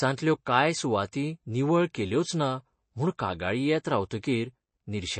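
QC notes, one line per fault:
throughout, MP3 compression: likely a starved MP3 encode, fitting roughly 32 kbps, removes everything above 8.3 kHz and weak detail, so the speech sounds dull and watery.
0.45 s, pre-echo: quantisation noise spread across a transform block leaks about 10 ms ahead of a sharp attack, heard as a brief hiss that softens it.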